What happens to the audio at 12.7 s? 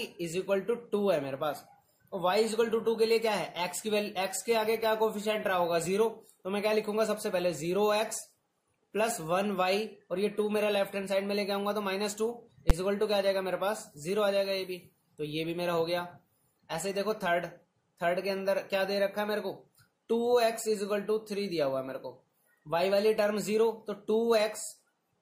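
At 12.70 s the audio jumps to one extreme value, far beyond its peaks, for about 10 ms: invalid numbers at full scale. A calculation in the processing chain produced infinite or undefined values, and these were forced to the largest possible sample value for that block. Because the block is so short, it comes out as one hard bang. That separates it from ordinary clipping, which flattens peaks of real sound, and from a dropout, which goes silent instead of slamming to the maximum.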